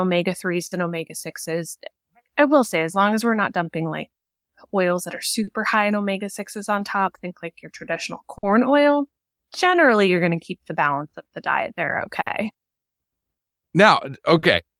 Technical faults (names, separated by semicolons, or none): clock drift between sender and receiver; repeated timing corrections; short stall from a late packet